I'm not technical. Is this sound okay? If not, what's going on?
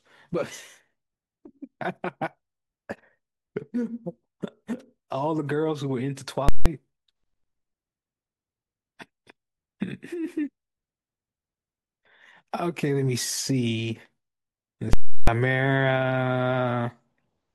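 No. The speech is interrupted twice by invalid numbers at full scale, once from 6.49 to 6.66 s and again from 14.93 to 15.28 s. A calculation went wrong and its results were replaced by the loudest possible level for a whole block of audio, so you hear a sharp bang going in, nothing in between, and another bang coming out. A plain dropout would just go quiet, and a single click wouldn't be paired like this.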